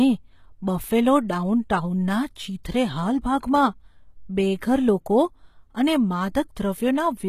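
From start to end the speech shows plainly audible codec damage, likely HE-AAC compression at a low bitrate near 20 kbps. The treble is rebuilt from copied lower bands, so sibilants sound gritty and lispy, and nothing is present above 14.9 kHz.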